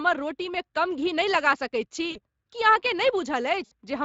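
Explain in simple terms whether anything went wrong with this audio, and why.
Yes. The whole recording has Speex codec damage. This older chat codec squeezes speech hard, so it sounds plainly rough, noisy and hoarse throughout.

There are also two dropouts from VoIP packet loss concealed by the speech codec, at 2.11 to 2.19 s and at 3.65 to 3.72 s. About 40 ms and then 60 ms of sound never arrived. The decoder filled each gap by stretching the last sound into a fading smear.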